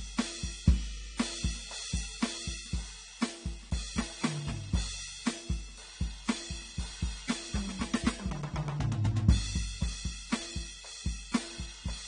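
From start to end, the music lacks everything above about 9.7 kHz. Sustained tones warble and high detail turns fizzy and smeared. This is AAC compression damage, likely from AAC-LC at a low bitrate, which fits about 32 kbps. The encoder dropped bands it could not afford.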